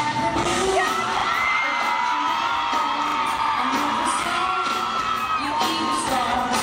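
Repeated buffers occur at 1.2 s, 3.08 s and 4.68 s: playback ran short of fresh audio, so the last piece, consistent with a 40 ms buffer, was replayed once, twice at 3.08 s, giving brief hard-edged stutters with nothing apparently skipped.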